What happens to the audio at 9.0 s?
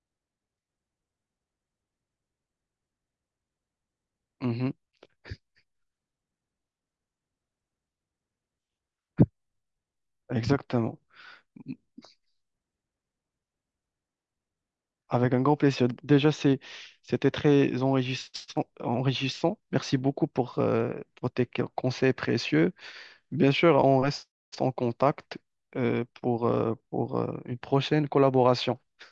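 Nothing goes wrong at 9.0 s; the speech carries on intact through that moment, with no dropout, click, distortion or other fault to be heard.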